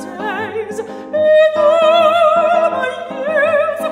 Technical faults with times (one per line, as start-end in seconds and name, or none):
none